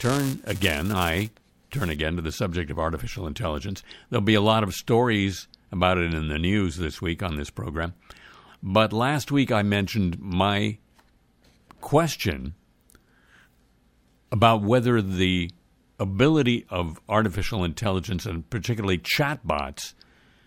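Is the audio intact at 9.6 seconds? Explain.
Yes, at 9.6 seconds the audio plays through cleanly, with no dropout, click, distortion or other fault heard at that moment.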